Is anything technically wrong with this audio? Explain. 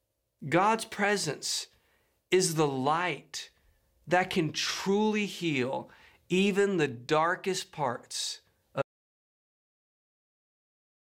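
Yes. At 8.82 s, just after "even the darkest parts", the speech cuts out mid-flow into silence, with no room tone, lasting about 2.3 s to the end. This audio dropout to silence likely comes from lost input while the recorder kept writing zeros.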